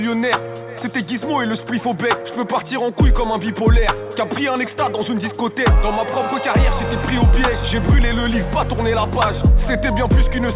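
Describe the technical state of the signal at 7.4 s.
At 7.4 s the signal is intact, with no audible dropout, distortion, glitch or other technical fault at that point.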